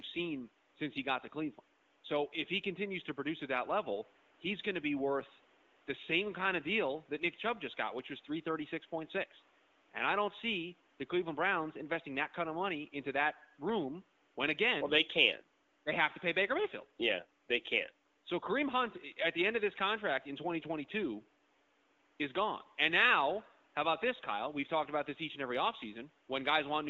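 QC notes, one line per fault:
No faults found in the clip. Room noise sits about 35 dB below the speech, and the AMR wideband (HD Voice) codec, at a quality that fits its 12.65 kbit/s rate, leaves the speech clear.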